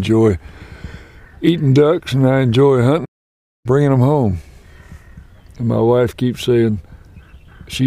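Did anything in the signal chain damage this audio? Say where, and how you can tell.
Yes, at the playback stage. A playback stall cuts the sound off mid-flow at 3.05 s, leaving silence until 3.66 s, roughly 0.6 s, before it resumes. The clean gap with no decay points to the player likely running out of buffered data or being briefly blocked.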